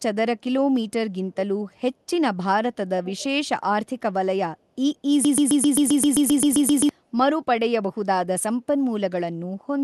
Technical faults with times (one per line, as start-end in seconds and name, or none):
3.04-3.23 echo leak
5.25-6.89 broken-record loop